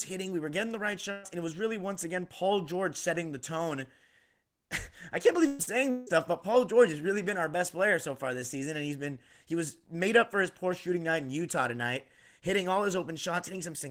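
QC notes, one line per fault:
1.11–1.26 s and 5.47–5.62 s, burst of packet loss: after "were getting the right" and after "can't believe", the sound holds and fades for about 115–118 ms and then jumps ahead. The receiver stretched the last sound over roughly 120 ms of lost packets.
5.63–5.70 s, short concealed packet loss: a brief smear or wobble just after the second burst. About 40 ms never arrived and was patched by continuing the previous sound.
5.91–6.10 s, long network dropout: about 160 ms of held, fading sound, then the audio resumes further on with that stretch gone. This was likely a stall in arriving audio, filled in by concealment.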